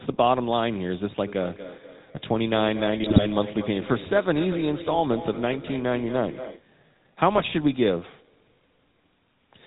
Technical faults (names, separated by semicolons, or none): GSM full-rate codec; feedback echo between two devices; GSM bit errors